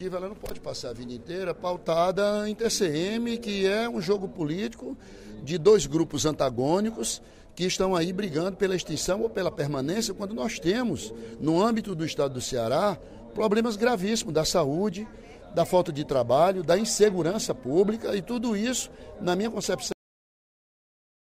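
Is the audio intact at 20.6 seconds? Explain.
No. At 20.6 s the audio falls inside a cut-off end running from 19.92 s to 21.26 s. The final buffers were never written, so the sound stops mid-event at 19.92 s. It drops straight to digital silence with no natural decay.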